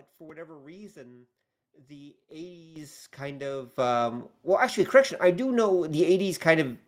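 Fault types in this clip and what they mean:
Microphone volume stepped up: the call software judged the microphone too quiet and raised the device's input volume in single jumps, so the voice and the background noise get louder together at once. It happens three times, at 2.76 s after "for whatever reason the" (about 10 dB), at 3.78 s after "kind of" (about 8 dB), and at 4.8 s just before "correction I do" (about 3 dB), each one landing in the middle of speech.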